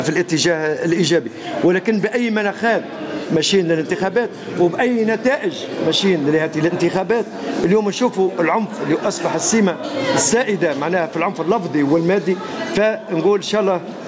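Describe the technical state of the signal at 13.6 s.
At 13.6 s the signal shows gain pumping, which runs through the whole clip rather than being a local event. The likely cause is input gain set far too high with a fast limiter clamping down on each loud sound, so the level swings by around 20 dB. Loud and soft parts end up closer in level, and the sound is squashed. On the waveform this appears as a flattened, squashed envelope. The spectrogram shows nothing above 8 kHz from the call's microphone path.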